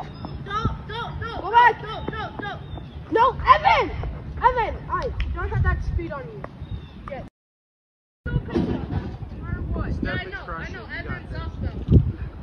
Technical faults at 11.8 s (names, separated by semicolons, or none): none